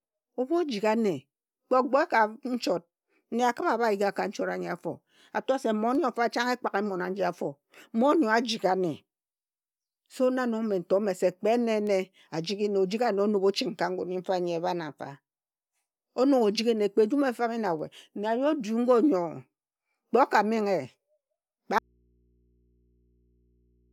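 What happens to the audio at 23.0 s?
At 23.0 s you're inside an audio dropout to a faint residue. The speech cuts out abruptly at 21.79 s and never comes back before the clip ends. What's left in the gap is just mains hum, sitting something like 40 dB below where the speech was. That points to the wanted signal likely being lost upstream while the input after the break stayed open and live, so it picks up hum instead of going dead silent.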